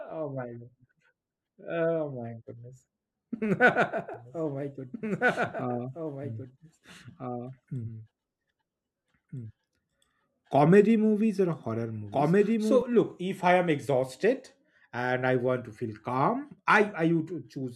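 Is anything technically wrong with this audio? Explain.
Yes. A doubled audio track runs from 4.14 s to 12.82 s, stopping just before "look if i am". The speech is likely captured a second time by a slower path, so a dry full-band copy about 5 dB quieter trails roughly a second and a half behind, starting and stopping abruptly.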